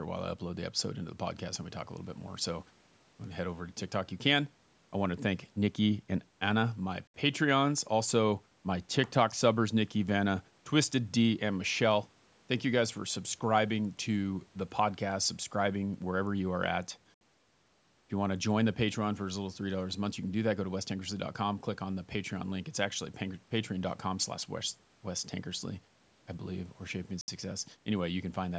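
At 7.07 s, 17.14 s and 27.21 s the speech drops out for about 69 ms each, one hole per 10 s chunk. This is a gap between chunks: silence inserted at each join, heard as short holes while no sound itself goes missing.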